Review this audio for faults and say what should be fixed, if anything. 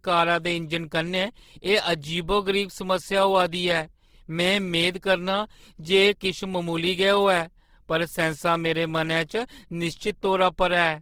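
Across the whole clip the speech sounds rough and grainy. Detail within bands has been replaced by noisy or folded fill, while energy still extends to 20.2 kHz. The cause is likely Opus compression in its CELT music mode, with plainly audible damage that points to a low bitrate around 16 kbps. To prevent it, encode speech at a higher Opus bitrate, or keep a lossless master and compress only at delivery.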